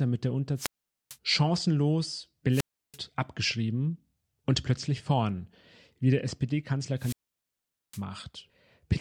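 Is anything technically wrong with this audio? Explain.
Yes. The speech has three wireless microphone squelch dropouts: 0.55 to 1.17 s just after "mit der" (about 0.44 s muted), 2.51 to 2.98 s just before "abgeschrieben und plötzlich vorn" (about 0.33 s muted), and 6.97 to 8.02 s (about 0.81 s muted). In each, the radio signal fades, so hiss swells until the receiver's squelch shuts the output to near silence, then the voice returns. That rising static before each hole distinguishes it from a digital dropout or a plain edit cut.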